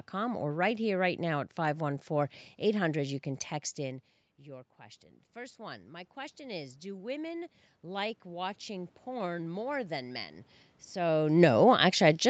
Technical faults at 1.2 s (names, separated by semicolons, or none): none